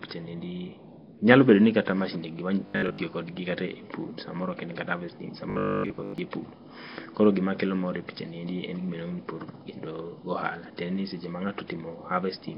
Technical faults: Nellymoser compression; robotic sound from repeated short buffers

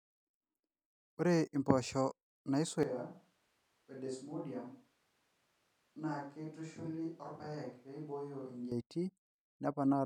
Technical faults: switch to a distant microphone

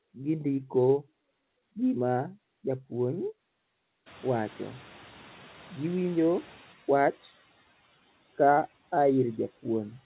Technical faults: noise suppressor catching up

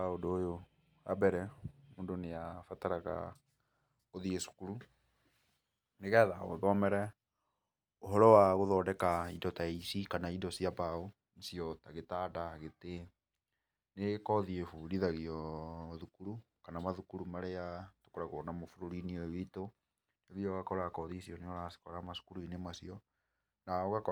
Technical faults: none

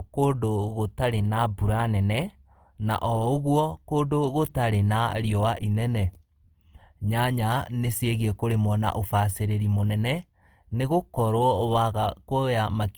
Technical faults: Opus compression

